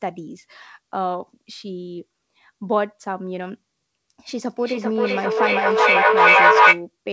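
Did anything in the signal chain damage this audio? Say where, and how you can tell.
Yes. The damage is in call processing: a feedback echo between two devices runs from 4.37 s to 6.87 s, over the band-limited call audio that stops at 8 kHz, consistent with G.722 at 64 kbps. The speech returns at a fixed interval of roughly 0.4 s, each pass thinner and more ringing. The repeats stack instead of decaying, peaking about 12 dB above the speech. A second device is replaying this feed into a nearby microphone, and neither echo canceller sees the other's output.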